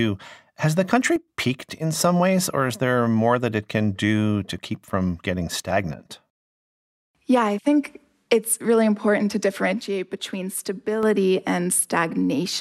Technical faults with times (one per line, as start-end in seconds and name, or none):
1.16-1.28 one channel drops out
9.81-11.03 one channel drops out